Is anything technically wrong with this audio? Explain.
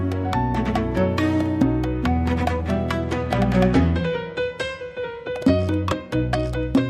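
No, no technical faults are audible.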